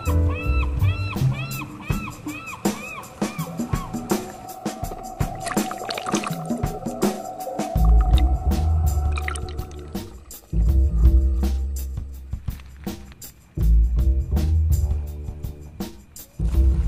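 Nothing here sounds like it went wrong anywhere in the transmission or recording chain, so there's really nothing to flag in this audio.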